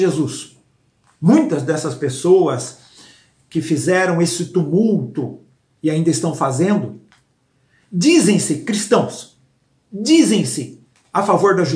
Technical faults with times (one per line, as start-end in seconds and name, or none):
none